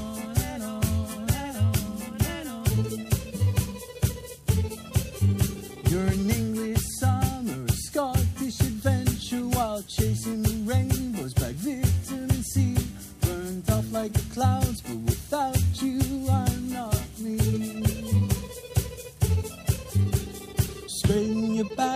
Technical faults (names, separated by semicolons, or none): none